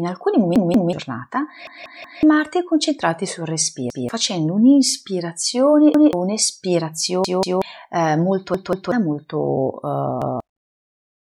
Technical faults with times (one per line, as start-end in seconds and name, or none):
0.56-0.93 repeated buffer
1.67-2.23 repeated buffer
3.90-4.09 repeated buffer
5.94-6.13 repeated buffer
7.24-7.62 repeated buffer
8.54-8.92 repeated buffer
10.22-10.40 repeated buffer